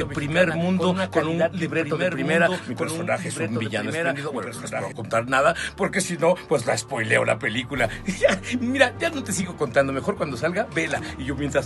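A doubled audio track runs from the very start until 4.92 s: a copy trails about a second and a half behind, around 5 dB quieter, likely from a second capture path.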